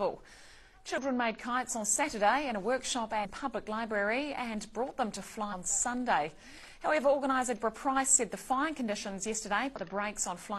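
Five brief glitches, each about 50 to 60 ms, break into the audio at 0.98–1.03 s, 3.21–3.27 s, 5.48–5.54 s, 7.53–7.59 s and 9.76–9.80 s. This is damaged data in a compressed stream: corrupted bytes make the decoder misread frames and lose sync until it finds the next valid frame header.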